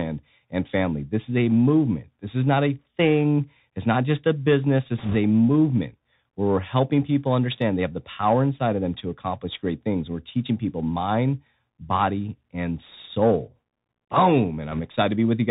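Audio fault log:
Throughout: Bluetooth CVSD headset codec. The speech is squeezed through a narrowband headset codec, consistent with a 64 kbps CVSD link, which tracks the waveform one up-or-down step at a time with an adapting step size. A spectrogram shows a hard ceiling at 4 kHz with nothing above it and a grainy noise floor under the speech. Where loud, fast-rising parts outrun the step, the waveform rounds into slope-limited ramps, so s sounds turn scratchy and a fine hiss sits beneath everything.
4.98–5.16 s and 14.72–14.80 s: bit errors on a Bluetooth voice link. Flipped bits corrupt the CVSD stream in two short bursts, at an error rate of a few percent in the first and about half that in the second. Because each bit only nudges the signal by one step and the errors fade out, there are no loud clicks, only a rushing crackle over the speech. It is heavier in the first burst. The spectrogram shows speckled noise confined below 4 kHz with no vertical click lines, and the waveform thickens into fuzz with no spikes.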